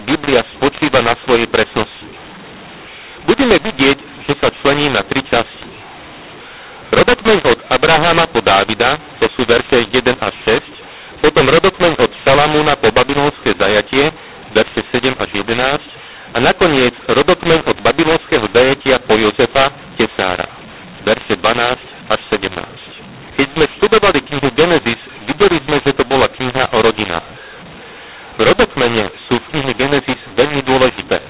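Telephone speech, band-limited to nothing above 4 kHz as expected from 8 kHz G.711 sampling, suffers a mu-law and A-law mix-up for its whole length. Samples coded as A-law are decoded as mu-law, so levels are scrambled, the speech turns harsh and distorted, and the pauses fill with noise.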